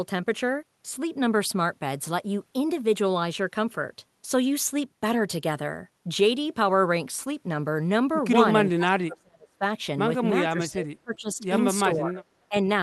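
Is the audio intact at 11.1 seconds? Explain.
No. At 11.1 s the speech sits inside a stretch of speech suppressed in double talk, running from 10.45 to 11.4 s. The level dips unevenly, losing roughly 20 dB at its deepest, with around 0.7 s affected in all. The likely cause is an echo canceller that, with both sides talking at once, couldn't tell this talker from loudspeaker echo and turned everything down. On a waveform the envelope sags and breaks into gaps. A spectrogram shows thinned, patchy energy.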